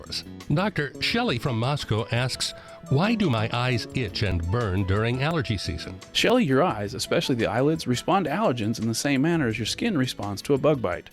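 Overlap between stream segments produces tiny skips at 1.37, 2.35, 3.33, 4.32, 5.31, 6.30 and 8.27 s, spaced at roughly one-second segment boundaries. Unlike dropouts, no silence appears. The overlapping sound is cut away, so the waveform jumps.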